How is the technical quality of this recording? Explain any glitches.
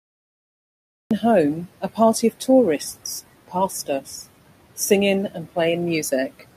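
The recording has two faults: a cut-off start and noise suppressor artifacts running through the whole clip.

The cut-off start occupies the opening 1.11 s, which is pure digital silence. The audio then begins abruptly at 1.11 s, partway into a speech sound, with no natural attack. Capture or streaming evidently began late, so the first part of the sound was never recorded. It differs from a dropout because nothing precedes the silence, and from a fade-in because the level jumps straight to full.

Noise suppressor artifacts persist throughout. The suppressor estimates which frequency bands hold steady noise and lowers them frame by frame, cutting the room noise by about 18 dB. That noise is about 19 dB below the speech and is not itself a fault. The leftover noise dips in the pauses and swells under the speech. Unlike plain broadband hiss, this residue keeps changing with the speech rather than holding steady.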